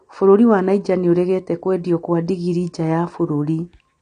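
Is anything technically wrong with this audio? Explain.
Yes. Throughout the speech there is plainly audible AAC compression damage. Nothing reaches above 9.6 kHz, so the sound is dull and smeared, with a warbling, fizzy texture on sibilants and held sounds. The likely cause is an AAC-LC encoder starved of bits, which fits a bitrate around 32 kbps. It trims the top band and quantises the remaining frequency lines coarsely. A spectrogram would show a hard ceiling at 9.6 kHz.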